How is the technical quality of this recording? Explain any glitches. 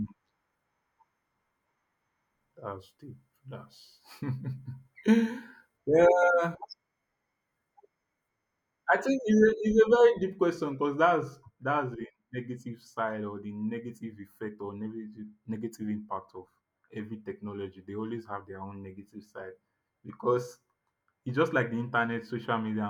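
The recording has one fault. From 9.39 s, just after "I think", to the end, de-emphasis has been applied wrongly. A treble cut was added where no pre-emphasis existed, or was applied a second time. Highs fall smoothly, about 8 dB down at 10 kHz. The voice turns dull and muffled.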